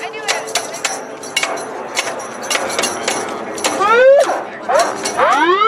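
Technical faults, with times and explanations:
Nothing stood out on listening to this clip.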